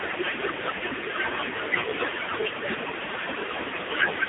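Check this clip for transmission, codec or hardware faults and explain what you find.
Three faults run through the whole recording: noise suppressor artifacts, heavy AMR narrowband mobile codec damage, and speech cut by the noise suppressor.

Noise suppressor artifacts last from start to finish. The suppressor judges each frequency band frame by frame and pulls down whatever it takes for steady noise. The room noise, sitting about 10 dB below the speech, sinks between phrases and surfaces under them. On a spectrogram the background shows as patchy, blinking islands instead of an even haze, with dark gaps opening between syllables.

The AMR narrowband mobile codec shapes the entire clip. The voice is rebuilt from a vocal-tract model driven by sparse pulses, and the heavy buzzy, synthetic quality points to a low AMR-NB mode, which fits roughly 5.9 kbps. The band runs from about 250 Hz to 3.7 kHz, and nothing appears above 3.8 kHz. 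A spectrogram shows a hard ceiling there, with empty space above, smeared harmonics and a thin low end.

Speech cut by the noise suppressor spans 0.0 to 4.29 s, affecting nearly the whole clip. The suppressor mistakes parts of the speech for noise and turns soft consonants, word endings and quieter stretches down with the background, by as much as about 22 dB at the deepest point. These sound swallowed or faint. The waveform shows tails of words collapsing abruptly, and the spectrogram shows weak consonant energy missing in chunks.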